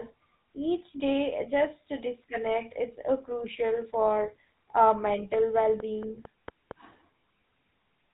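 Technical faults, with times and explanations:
Throughout, GSM full-rate codec: the audio is narrowed below 4 kHz and sounds buzzy and gravelly. Pulse-driven vocal-tract modelling at about 13 kbps causes this.
5.10 to 6.72 s, train of clicks: about seven evenly spaced clicks, 4.35 per second, pop up to about 5 dB above the speech. Interference from nearby equipment or a faulty connection or power supply is the likely source.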